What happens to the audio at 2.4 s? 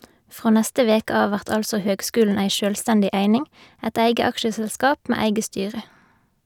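Nothing goes wrong at 2.4 s; the speech plays through that point intact, with no dropout, click, distortion or other fault.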